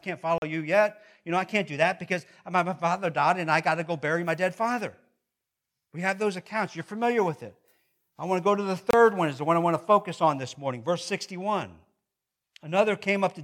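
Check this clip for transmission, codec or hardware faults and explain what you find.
Two brief gaps interrupt the speech, at 0.38–0.42 s (40 ms) and 8.91–8.93 s (about 27 ms). A Bluetooth dropout is the likely cause: packets missed their deadline, so playback went silent and then resumed as though time had continued. Each gap shows as a flat stretch in the waveform and a clean vertical blank across all frequencies in the spectrogram.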